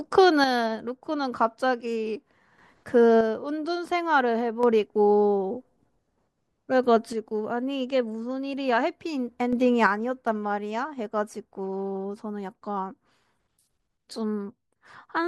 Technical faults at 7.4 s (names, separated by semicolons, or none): one channel drops out